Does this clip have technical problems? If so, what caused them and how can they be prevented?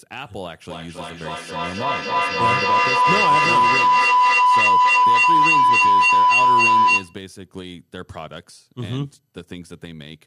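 Yes. A feedback howl runs from 0.7 s to 7.2 s, peaking about 13 dB above the speech. Two devices in the same room are joined to one call, so the sound leaving one loudspeaker reaches the other microphone and comes back louder each time around. The repeats grow and narrow to a tone near 1 kHz, pulsing roughly every 0.3 s, the loop's round-trip delay. To prevent it, keep only one device's microphone and speaker active per room, or mute the second device.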